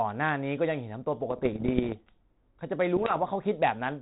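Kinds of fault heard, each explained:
Bit errors on an ADPCM link: from 1.30 to 1.93 s and again from 2.96 to 3.18 s, flipped bits at a rate under one percent corrupt the coded differences and throw the decoder's step size and predictor off, leaving pops and rough bursts that briefly swing in level.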